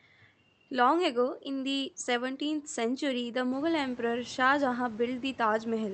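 No technical faults can be heard in this speech recording. The room's background noise rises by about 15 dB roughly three and a half seconds in but stays about 25 dB below the speech, and the call path's audio band reaches up to 8 kHz.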